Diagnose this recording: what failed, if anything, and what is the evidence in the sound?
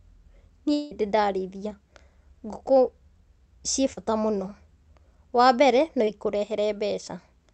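Network stage, long network dropout. From 0.73 to 0.93 s the speech stops and the last sound carries on as a fading continuation for nearly the whole gap, then speech resumes with about 180 ms missing. This is likely a network outage that the receiver's concealment papered over.

Network stage, short concealed packet loss, at 3.93 s (about 40 ms) and 6.05 s (about 20 ms). Each spot is a brief smear where the decoder extrapolated the preceding sound across the lost packets, then cross-faded back into the real speech.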